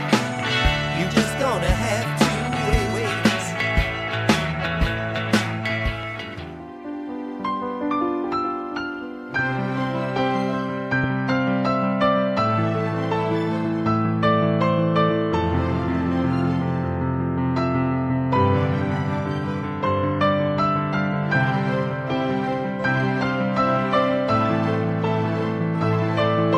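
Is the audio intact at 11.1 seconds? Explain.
No. A brief voltage pulse, likely from a plug, switch, static discharge or driver glitch, entered the signal path from 11.04 to 11.06 s. It is heard as a single sharp loud pop rising about 5 dB above the sound, which continues underneath.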